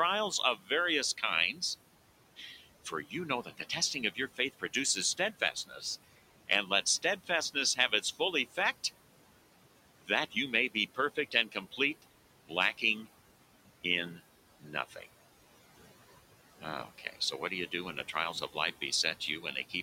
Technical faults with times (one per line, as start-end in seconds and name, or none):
0.00-19.82 noise suppressor artifacts
0.31-1.62 speech cut by the noise suppressor
2.37-8.58 speech cut by the noise suppressor
9.99-13.07 speech cut by the noise suppressor
13.84-15.06 speech cut by the noise suppressor
16.61-19.73 speech cut by the noise suppressor